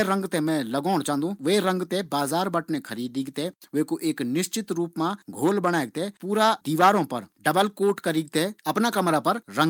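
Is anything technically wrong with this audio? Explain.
No, nothing technically wrong can be heard in this speech recording. Listening closely turns up no defect to point to.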